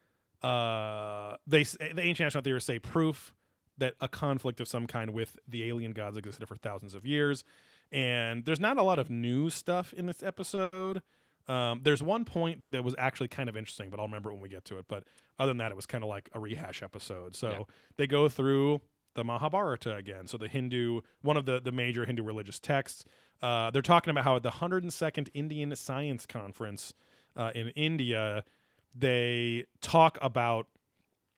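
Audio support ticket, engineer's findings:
Short stall from a late packet, 10.55–10.59 s, right after "new stuff in this": jitter buffer underrun, last sound stretched about 20 ms, nothing lost. Spectrogram shows harmonics smeared flat horizontally; waveform shows a repeated, slightly buzzy cycle.
Second short stall from a late packet, 10.63–10.74 s: same receiver concealment, held about 90 ms. Longer flat harmonic band, faint amplitude dip in the waveform. Both stalls push playout delay up (20 ms, then 90 ms).

Call audio freeze, 12.60–12.79 s, just before "was actually kind of": likely packets held up in transit, so the jitter buffer ran dry. About 110 ms of concealment, decaying to roughly 70 ms of silence. Spectrogram: fading smear, then a blank column.

Jitter buffer speed-up, 14.84–16.40 s, from "we get to it" to "rehash episode": buffer over target, pitch-period chunks trimmed, about a tenth of a second total. 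Playback at 107% speed, pitch unchanged, sounds hurried. Waveform: syllables compressed, tiny splice points between cycles.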